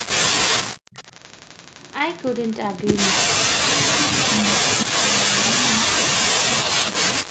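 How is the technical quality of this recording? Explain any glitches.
The recording has three echo-canceller faults in its first 6.2 seconds.

From 0.77 to 0.92 s, the room background is gated by the echo canceller. It clamps the microphone about 39 dB, leaving a near-silent notch in the waveform.

From 0.92 to 1.94 s and 2.17 to 2.87 s, an echo leak is heard: a faint copy trailing 204 ms behind, about 25 to 30 dB down. It is likely residual loudspeaker pickup and shows as a ghost repeat in the spectrogram.

From 4.27 to 6.15 s, speech is suppressed in double talk, likely because the canceller ducked both talkers together. For about 1.5 s the voice dips as much as 35 dB, within the call band, which stops at 8 kHz.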